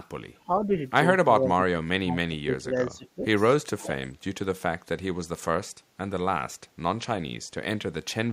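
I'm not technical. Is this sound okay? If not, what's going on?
No. Speech suppressed in double talk: the voice dips or partly drops out at 0.66 s, 1.39 to 2.74 s, 2.9 to 3.27 s and 3.75 s, likely because both sides talked at once. Echo leak: from 3.82 to 4.08 s a faint copy of the voice returns about 0.43 s late, likely from a loudspeaker the canceller didn't fully remove.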